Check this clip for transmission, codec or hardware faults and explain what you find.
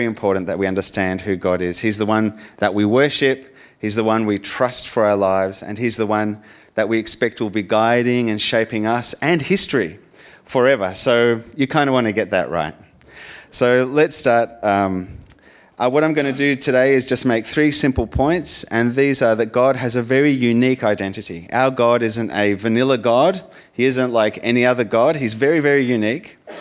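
I found no transmission, codec or hardware faults in this clip.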